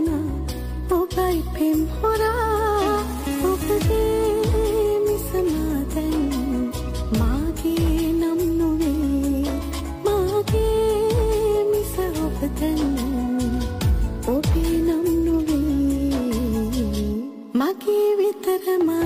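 At 9.6 s there's a brief garbled flutter lasting until about 9.82 s, and it's a case of frames out of order. Two neighbouring chunks of about 93 ms each, which fits two codec frames apiece, got decoded in swapped order, so that stretch plays with its halves exchanged. Nothing goes missing, and the timing carries on intact afterwards.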